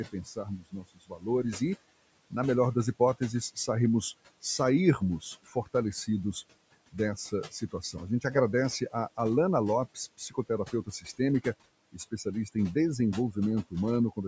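Speech cut by the noise suppressor: the suppressor mistook parts of the speech for background noise and turned them down by up to about 21 dB. This happens from 0.05 to 1.27 s, just before "e na melhor das", and again around 5.43, 7.51, 10.18, 10.72 and 11.92 s, leaving brief stretches faint or swallowed.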